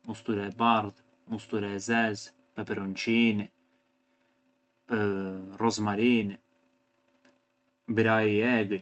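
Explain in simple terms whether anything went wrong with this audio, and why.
Nothing went wrong here: the speech travelled over a normal internet call link, whose Opus compression carries sound up to 8 kHz, and that link did its job as designed, with no technical problem to be heard at any point.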